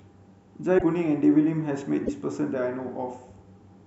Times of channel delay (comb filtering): none

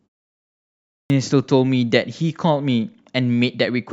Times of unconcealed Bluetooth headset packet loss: none

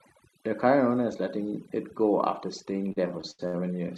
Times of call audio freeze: none

